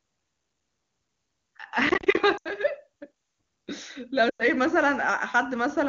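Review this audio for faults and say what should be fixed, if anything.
From 1.87 to 2.17 s there is processor overload crackle: about fifteen audio buffers of roughly 10 ms each missed their deadline and dropped to silence, so the speech breaks into hard-edged gaps heard as gritty crackle. Prevent it by giving the audio thread priority and a larger buffer margin.

Lost AMR speech frames cause two dropouts, 80 ms at 2.37 to 2.49 s and 100 ms at 4.29 to 4.46 s. The wideband decoder repeats the last good voice parameters with falling gain, so the sound drops to near silence within two frames, which fits runs of four and five 20 ms frames. Prevent them with stronger radio error protection or better signal conditions.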